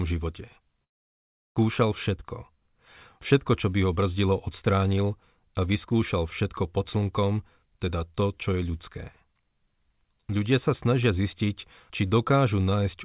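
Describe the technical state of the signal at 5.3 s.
At 5.3 s the speech is intact, with no fault at that moment beyond the ordinary narrowband sound of the call path, which carries nothing above 4 kHz.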